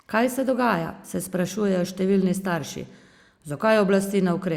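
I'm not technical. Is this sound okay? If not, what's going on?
Yes, nothing in this recording stood out as a problem when I listened to it.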